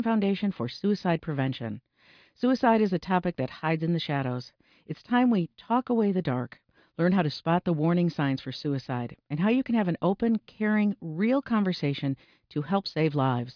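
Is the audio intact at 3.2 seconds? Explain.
Yes, the audio is intact at 3.2 seconds, with no dropout, click, distortion or other fault at that point.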